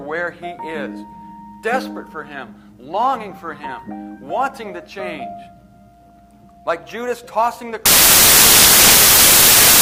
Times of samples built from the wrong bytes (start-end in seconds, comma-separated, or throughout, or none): 7.86-9.81